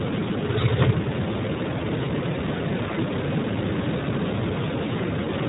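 From start to finish the speech runs through the iLBC codec, and you can hear it plainly. Everything above about 3.8 kHz is gone, so it has that boxed-in narrowband phone sound. Each short frame's excitation is coded on its own, which leaves the speech clear but slightly rough and synthetic, with a gritty, buzzy edge. The character fits iLBC's 20 ms frame mode at around 15.2 kbps.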